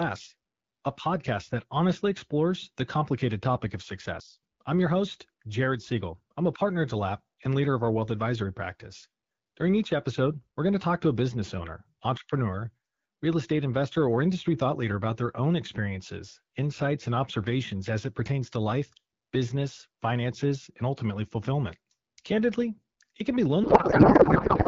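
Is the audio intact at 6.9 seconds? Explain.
Yes, the speech at 6.9 seconds is intact, carried cleanly through the AMR wideband (HD Voice) codec at 12.65 kbit/s with no fault at that moment.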